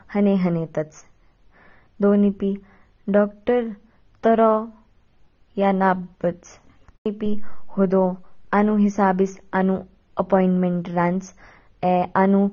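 From start to finish the speech sounds dull and smeared, with nothing above about 6.9 kHz and a fizzy, warbly edge on sibilants. That's likely AAC compression, consistent with AAC-LC at a low bitrate around 24 kbps, where the encoder drops the top band and coarsely quantises what's left.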